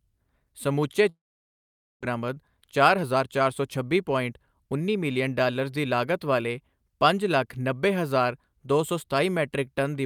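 A speech recording with two faults. From 1.09 to 2.05 s the sound briefly continues as a fading buzz and then drops to near silence for about 0.84 s. About 600 ms of the speech never returns. This is likely a long network dropout. On a spectrogram, smeared harmonics fade into an empty band, and the waveform flattens. From 2.12 to 4.95 s, a jitter buffer speed-up removes short pitch-period slices to shed the roughly 300 ms of built-up delay. Speech runs about 111% fast at unchanged pitch, sounding hurried, until "ਮਿਲੀਅਨ ਡਾਲਰਜ਼ ਦੀ ਲਾਗਤ". The waveform looks compressed in time, while harmonic spacing on the spectrogram stays the same.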